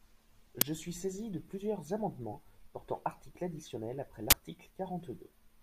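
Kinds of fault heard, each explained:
Uninitialised buffer: a playback block was sent out before any audio had been written into it, so whatever stale memory it held was played as samples, producing a short, very loud burst of digital noise. In this speech clip it happens twice: a brief burst at 0.61 s, just before "suis saisi de plusieurs", lasting about 6 ms, which fits a 256-sample buffer; and a longer burst from 4.30 to 4.33 s, right after "portant articles additionnels après", whose roughly 21 ms span fits a 1024-sample buffer.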